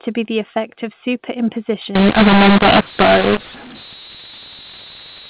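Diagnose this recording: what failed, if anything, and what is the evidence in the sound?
The decoder went wrong: from 1.95 s to the end at 5.29 s, telephone audio coded with G.711 A-law is being expanded with the mu-law table, a mu-law and A-law mix-up at the codec stage. The two logarithmic curves assign different levels to the same 8-bit codes, so amplitudes are scrambled, with some peaks swollen and others shrunk. The speech turns harsh and gritty, and quiet gaps fill with hiss where near-silent samples are lifted well above zero.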